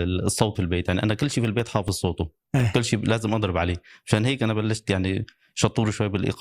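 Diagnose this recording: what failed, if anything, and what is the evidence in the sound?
Codec stage, during decoding. At 0.55 to 0.59 s the speech jumps forward, losing around a fifth of a second. The missing stretch fits about ten 20 ms frames the decoder never played, whether absent from the file or rejected as corrupt. The forward jump with nothing repeated distinguishes compressed frames skipped from a buffer underrun's gap or a hard edit.

Storage and playback stage, from disc. Between 1.31 and 2.75 s there are eleven CD scratch ticks, about seven or eight a second, each lasting only a few milliseconds. A scratch passes under the laser once per revolution and destroys more data than error correction can rebuild, so the player interpolates or mutes those samples. The steady rotational spacing separates this from random vinyl crackle or digital clipping clicks.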